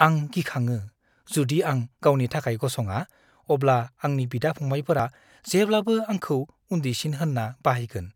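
At 2.02 and 5.00 s the speech skips ahead, losing about 20 ms each time, three seconds apart: audio missing between chunks, likely dropped at each chunk handover.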